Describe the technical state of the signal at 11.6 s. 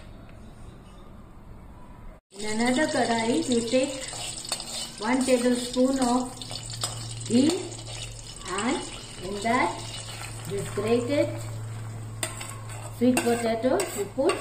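At 11.6 s you're hearing channel delay, comb filtering, and it runs through the whole clip. One side lags the other by just a few samples, a small fraction of a millisecond, so the mono sum cancels at spaced frequencies starting near 7 kHz, leaving the top end hollow and phasey.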